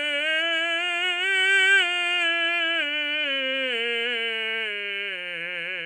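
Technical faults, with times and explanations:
No technical faults are heard in this music.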